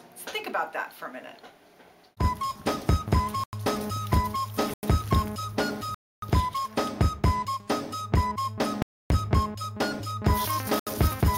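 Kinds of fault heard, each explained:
Block of digital silence: chunks of the audio drop straight to silence and come back with no fade, leaving a short hole. There are five here: two of about 93 ms near 3.4 s and 4.7 s, which fits a 4096-sample buffer going unfilled, two longer ones of about 280 ms at 5.94 s and 8.82 s, and a 73 ms gap at 10.79 s.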